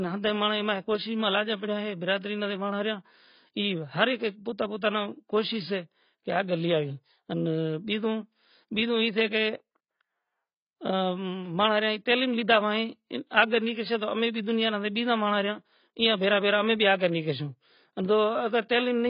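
A speech recording with heavy AAC compression damage throughout. Nothing is present above about 5.1 kHz, so the sound is dull and lacks sibilant detail, and the remaining band is smeared with a warbling, fizzy texture on sustained sounds and sibilants. The cause is likely low-bitrate AAC-LC encoding, which fits roughly 16 kbps. At that rate the encoder drops the top of the spectrum and quantises what remains too coarsely.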